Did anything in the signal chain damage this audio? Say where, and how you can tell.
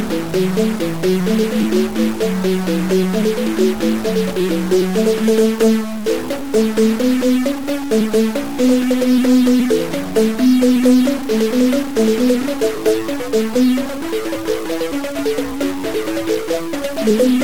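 Yes. A harsh, buzzy distortion runs through the whole clip, from start to finish. It rides on the waveform itself, changing character as the signal moves. Quiet passages do not go quiet. They fill with a gritty noise floor. The error step sits at about -25 dBFS, a fairly high bit. This is a stuck bit, likely from a broken data line or a faulty converter. Roughly half the samples are pushed off by that bit's weight.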